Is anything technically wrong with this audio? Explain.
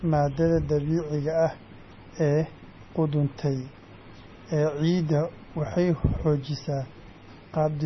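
Yes. MP3 compression artefacts run throughout the whole speech clip, and the damage is heavy. Nothing is left above about 5.9 kHz, which points to a very low bitrate, around 24 kbps. The likely cause is an encoder starved of bits. It cut the treble at a fixed point and dropped weaker frequency lines that flicker on and off between frames. That gives the speech a watery, swirly texture, dulls s sounds and smears consonant onsets.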